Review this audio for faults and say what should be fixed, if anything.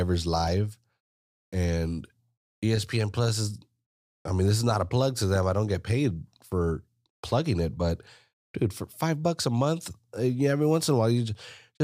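A brief click or buzz at about 0.47 s is a repeated buffer: fresh audio arrived late, so the device replayed its last very short chunk three extra times with hard joins. The 1.33 ms repeat fits a 64-sample buffer, and a few milliseconds of real sound were lost. Raising the buffer size or giving the audio thread higher priority would let new data arrive before the device runs dry.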